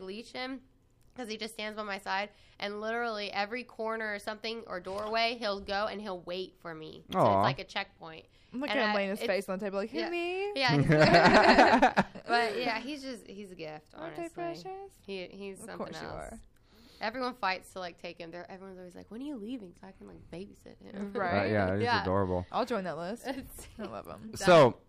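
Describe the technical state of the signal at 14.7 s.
At 14.7 s the signal is intact, with no audible fault at that moment.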